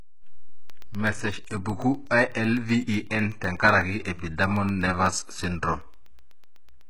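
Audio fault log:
throughout, HE-AAC compression: The treble sounds synthetic and gritty. S sounds turn lispy and metallic. Nothing is present above 11.5 kHz. The damage is heavy and points to a very low bitrate near 12 kbps. Likely cause: treble rebuilt by copying lower bands upward.
0.70 to 6.81 s, periodic USB or driver dropouts: Regular ticks recur every 0.125 s, about eight per second, roughly fifty in all. Each gap is a tiny sliver of silence, around a tenth of a millisecond. A background task repeatedly stalls the audio path at a fixed interval.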